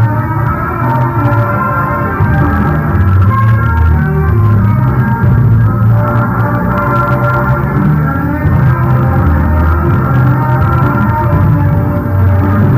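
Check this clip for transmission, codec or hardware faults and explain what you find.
Hard clipping runs throughout. The signal is overdriven by about 6 dB, so roughly one sample in twenty-five hits the ceiling. Flattened peaks add high harmonics, heard as crackle on loud moments.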